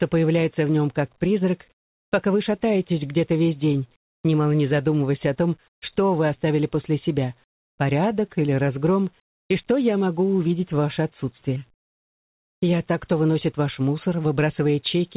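At 1.72 s the real background drops out for 400 ms, replaced by comfort noise. This smooth, featureless hiss sits about 15 dB lower. It recurs at 5.68 s for 140 ms, about 10 dB lower, and at 9.2 s for 300 ms, about 5 dB louder. The background is very quiet, about 42 dB below the loud parts. The likely cause is discontinuous transmission, with the receiver filling the gaps with synthetic noise.

From 11.56 s to 12.56 s there is channel delay with comb filtering. One channel lags by under a millisecond, and the mono sum cancels at evenly spaced frequencies. The first notch falls near 700 Hz. The sound turns hollow and phasey.

Throughout, nothing is heard above 4 kHz, which fits a narrowband G.711 call path.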